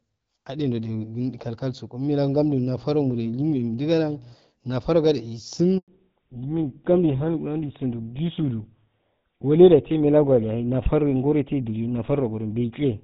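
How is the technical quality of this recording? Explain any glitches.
The quality is mixed: three faults degrade the call, which starts out as clear wideband speech consistent with HD Voice around 12.65 kbit/s.

Mains hum, 2.72 to 4.36 s: a ground loop or nearby transformer couples the 60 Hz power line into the signal, adding a steady low tone roughly 20 dB below the speech.

Handover gap, 5.78 to 5.88 s: the call switched networks and no speech frames arrived during the changeover, so the sound drops out for 100 ms and that stretch is lost.

Fallback to narrowband, from 5.88 s to the end: right after the handover the link dropped to an older narrowband codec, likely GSM full rate. Nothing above 4 kHz survives, so the voice sounds duller and rougher.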